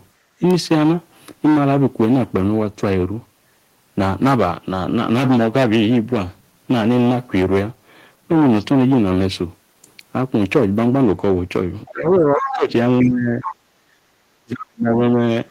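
From 0.15 to 0.4 s the background is gated by the echo canceller. While the loudspeaker plays, the canceller turns the microphone down, and the room sound dips by about 9 dB for roughly a third of a second before returning once the canceller releases.

Between 11.86 and 13.53 s a second voice comes through underneath, sitting roughly 10 dB below the main speech. This is likely the other side's voice leaking through: loudspeaker playback that the echo canceller failed to fully remove from the microphone signal.

Overlapping it, from 11.9 to 13.4 s, the speech itself is pulled down by up to roughly 20 dB for about a second in total. The canceller, likely facing double talk, could not separate the local talker from the loudspeaker echo and attenuated both, so the speech is suppressed in double talk.

At 13.68 to 14.0 s the background is gated by the echo canceller again, this time dropping by about 17 dB for roughly a third of a second.

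From 14.4 to 15.17 s the speech is suppressed in double talk once more, with the deepest drop reaching roughly 40 dB and about 0.7 s of speech affected.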